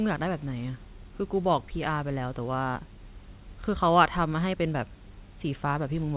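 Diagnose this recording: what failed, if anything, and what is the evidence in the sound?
Nothing failed in this recording, and the sound gives no evidence of any fault.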